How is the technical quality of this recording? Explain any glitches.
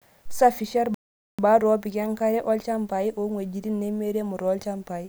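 The recording has one clear glitch. From 0.94 to 1.39 s there is a playback stall. The speech cuts to silence for about 0.44 s and resumes at "opik enkare". The player likely ran short of data or was briefly blocked.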